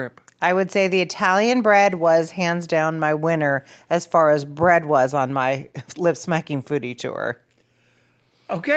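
Nothing's actually wrong in this bit of speech; it's simply gone through a normal call microphone and codec path, which is why nothing much comes through above about 8 kHz.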